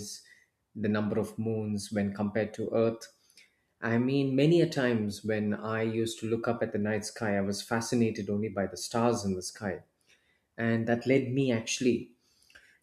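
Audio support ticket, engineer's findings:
No audible fault found on listening; the speech path gives no symptom to trace to any component, and the ticket can be closed as no fault found.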